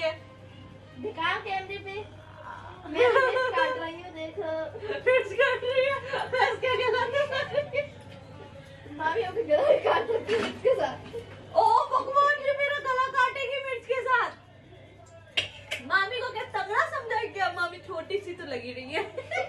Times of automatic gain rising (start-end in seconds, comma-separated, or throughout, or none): none